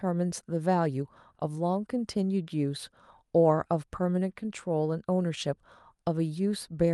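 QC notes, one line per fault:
No faults heard.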